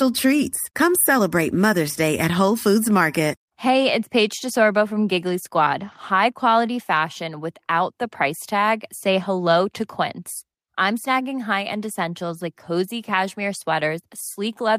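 Nothing stood out on listening to the speech recording.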